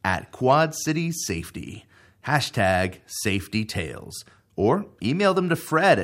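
Speech, with nothing technically wrong with it.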